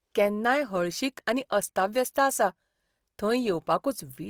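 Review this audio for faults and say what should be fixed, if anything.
Throughout, the speech sounds grainy and rough rather than swirly like MP3, pointing to Opus compression, likely in CELT mode at a rate fitting 24 kbps. Encode at a higher Opus bitrate or keep the original uncompressed source.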